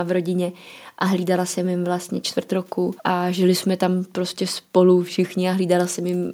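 No technical faults can be heard anywhere in this speech recording. Nothing in it calls for a timestamp or a note on what went wrong.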